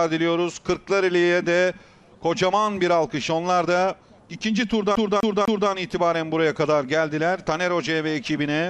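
From 4.95 s to 5.70 s the audio catches in a CD stuck on one turn: a scratch keeps knocking the laser back one track, so the same quarter-second slice, about 250 ms long, plays three times with a brief mute at each jump. It sounds like a quick, even stutter. On a waveform the same envelope repeats three times in a row, each copy separated by a thin gap. A spectrogram shows a matching repeated pattern, broken by narrow vertical seams.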